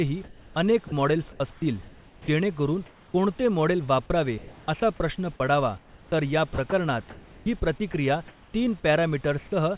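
From 0.24 to 2.28 s, the speech is chopped by the voice detector. About 1.0 s of this stretch is filled with comfort noise, and soft syllable edges vanish. The likely cause is a voice detector at the sender wrongly judging quiet speech as silence. The same pattern returns from 4.38 to 7.94 s, with about 1.2 s replaced. The band stops at 4 kHz throughout.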